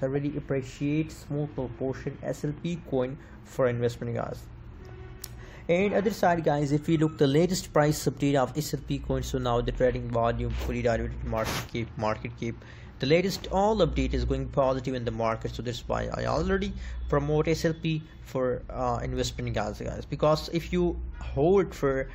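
No technical faults detected.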